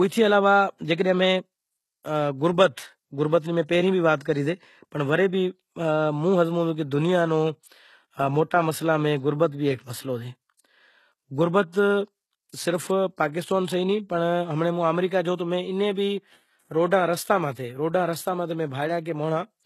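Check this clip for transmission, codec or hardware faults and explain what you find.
One codec fault runs through the whole speech recording. Throughout, it shows low-bitrate audio saved at a high bitrate: nothing exists above 12.3 kHz, and the low-bitrate artefacts remain. This is likely a very low-bitrate HE-AAC-style encode re-saved as high-bitrate MP3, which cannot restore the lost detail.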